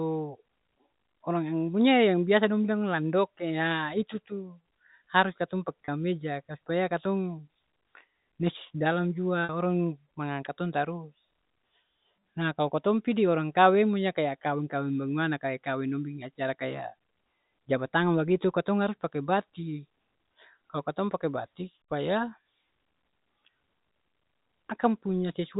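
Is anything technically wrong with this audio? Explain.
Yes. Twice in this speech clip, packets were lost and the receiver covered the gaps with packet loss with pitch repetition: from 5.85 to 5.88 s about 30 ms went missing, and from 9.44 to 9.49 s about 50 ms, which fits three and five lost 10 ms packets. The decoder looped the last pitch period into each gap and faded it out. Both gaps are short, so each sounds like a brief held, buzzy note, with the sound band-limited below 4 kHz by the G.711 telephone coding.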